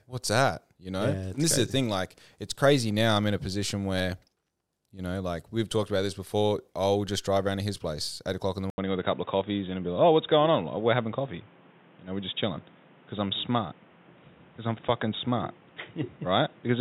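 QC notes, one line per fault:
8.70–16.80 s: input likely switched to a poorer device. After "eight o'clock in the", an 80 ms gap. Then speech is cut above 3.8 kHz, with faint new background noise.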